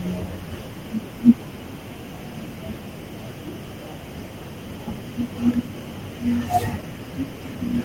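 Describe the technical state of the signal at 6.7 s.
At 6.7 s the speech signal is intact, with no technical fault audible at that moment.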